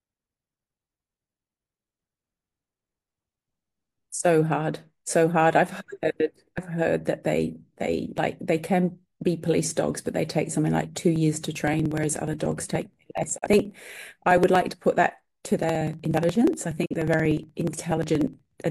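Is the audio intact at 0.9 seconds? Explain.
Yes, the speech at 0.9 seconds is intact, with no audible fault at that moment.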